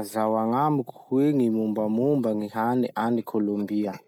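Nothing here calls for attention, since the speech comes through without any audible technical fault anywhere in the recording.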